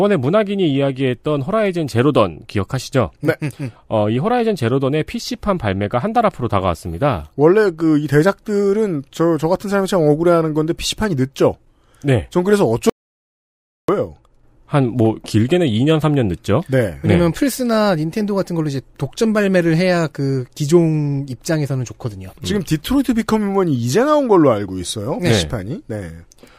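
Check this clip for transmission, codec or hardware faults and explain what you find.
One fault: an audio dropout to silence from 12.90 to 13.88 s, likely a lost input, leaving about 0.99 s of silence with no room tone.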